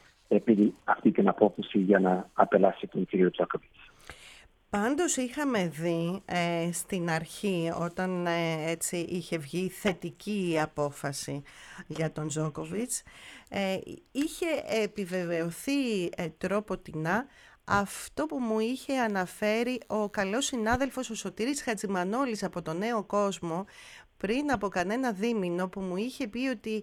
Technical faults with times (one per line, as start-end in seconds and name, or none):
18.81-20.81 DECT cordless phone buzz